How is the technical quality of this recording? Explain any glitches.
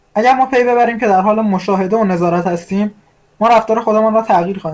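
The recording has one brief glitch, a short concealed packet loss, from 0.82 to 0.85 s. About 20 ms of the speech never arrived in time. The receiver covered the gap by extending the sound just before it, following its pitch if voiced or using shaped noise if not. It then blended back into the real signal. The result is a quick smear or wobble, and a very short consonant there may be lost. The call path's band-limiting, with nothing above 8 kHz, fits a wideband codec such as G.722.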